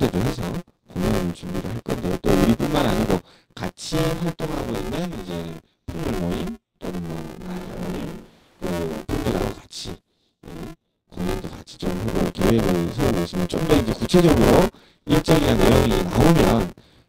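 The clip is speech with buffer tearing from start to finish. A steady robotic buzz sits under the voice at about 172 Hz, which fits a 256-sample buffer. It is heard only while there is sound. The writing program and the reading hardware have drifted, so their positions cross inside each buffer. A bit under half of every buffer holds stale audio from about 20 ms earlier. The joins on both sides of it are hard, and they repeat at the buffer rate. From 7.42 to 8.62 s there is a switch to a distant microphone. The cause is likely a close microphone dropping out and a further one taking over. The voice turns abruptly roomy and hollow, with thinner bass. The level barely changes. Room noise comes up to roughly 25 dB below the speech. The return at 8.62 s is just as sudden.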